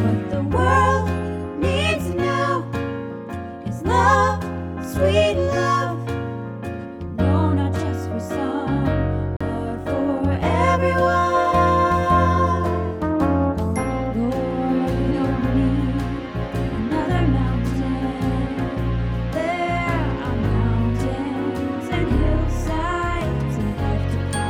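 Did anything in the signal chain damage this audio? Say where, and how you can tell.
Yes. At 9.37 s there is a brief dropout of about 40 ms, and the audio then resumes from a different point. This is a CD skip at the playback stage: the laser lost its track and landed on another turn of the disc's spiral.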